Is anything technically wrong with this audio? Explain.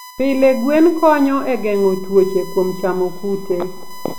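Yes. USB whine runs throughout: the bus's 1 ms frame current leaks through power or ground, leaving a steady 1 kHz tone roughly 20 dB below the speech.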